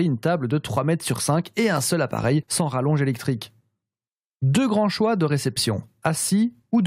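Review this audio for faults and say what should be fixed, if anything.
Nothing here needs fixing, since no technical faults turn up anywhere in this speech recording.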